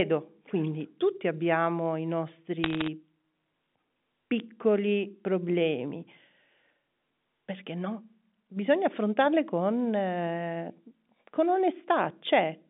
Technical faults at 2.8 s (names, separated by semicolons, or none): bit errors on a digital phone line